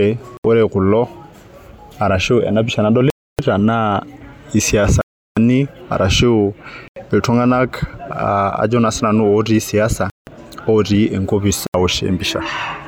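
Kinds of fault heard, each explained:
Bluetooth stall: the speech cuts to silence six times, for 70 to 350 ms, then resumes, likely the headphone buffer emptying while delayed packets were resent.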